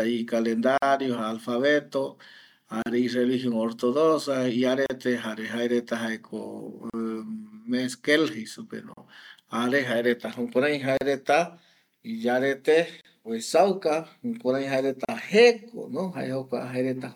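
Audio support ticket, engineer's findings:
Gap at a join of encoded pieces: short silences at 0.78, 2.82 (just before "i religion"), 4.86, 6.90, 8.94, 10.97, 13.01 and 15.05 s, one every 2.0 s. First about 48 ms, the rest about 38 ms. Component: segment concatenation after separate encoding. Each run's start-up delay and end padding were left untrimmed. Unlike dropout or packet loss, the sound resumes exactly where it stopped with nothing missing, the edges are smeared, and the spacing is strictly regular.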